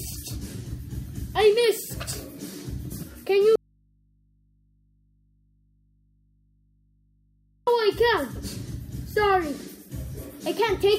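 An audio dropout to a faint residue runs from 3.56 s to 7.67 s: the sound cuts off abruptly for about 4.1 s, leaving only mains hum roughly 40 dB below the signal. The likely cause is a lost feed whose downstream path stayed live, picking up hum from the open input.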